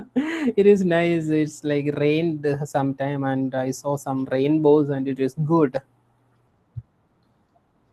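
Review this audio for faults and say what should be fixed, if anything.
Nothing in this speech recording needs fixing. No fault can be heard anywhere in it, so no change is called for.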